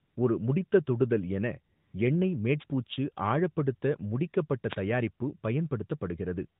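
A Tamil speech clip carried over what sounds like an AMR narrowband mobile link, with nothing above 4 kHz and only light codec colouring that fits the 12.2 kbps mode, has two kinds of fault. AMR comfort noise fills the gaps from 0.00 to 0.16 s, just before "ஒரு முடித்த தொடுதல் என", and from 1.76 to 1.94 s, right after those same words. In both spots the phone stopped sending speech frames for about 155 and 180 ms, and the receiver substituted a synthetic hiss for the real background. On a spectrogram these stretches show as flat, evenly textured bands that switch on and off abruptly, and in the waveform as smooth low-level noise with hard edges. A wireless microphone noise hit occurs from 2.59 to 2.64 s, immediately before "பூச்சு ஆழப்படுத்த முடிக்கப்பட்ட தயாரிப்பு", and again from 4.69 to 4.76 s. Each lasts roughly 50 to 75 ms and is heard as a brief swish of static. This happens when the FM radio link fades and receiver noise surges through. 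A spectrogram shows each one as a narrow vertical smear of broadband energy across the whole 4 kHz band, and the waveform shows a short ragged burst.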